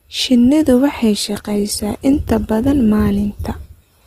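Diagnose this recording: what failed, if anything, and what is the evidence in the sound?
The failure is at the network and codec stage: an adaptive stream switched to a lower bitrate at 1.28 s and stayed there to the end of the speech. The quality drops suddenly, with no gap or dropout. From that point codec artefacts rise in the speech, which fits a step down from about 64 kbit/s Opus to about 16 kbit/s. Because there is no silence or glitch at the transition, this is a rendition switch rather than packet loss or concealment.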